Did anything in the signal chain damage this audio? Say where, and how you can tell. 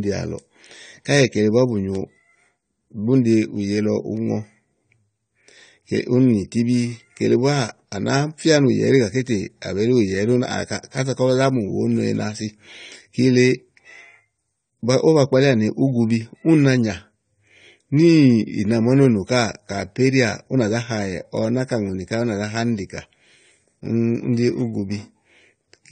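Yes. Throughout the speech the sound is dull and smeared, with nothing above 9 kHz and a fizzy, warbling edge on sibilants. The codec stage is the likely cause: AAC compression, fitting AAC-LC near 32 kbps, which lowers the cut-off and coarsely quantises the spectrum.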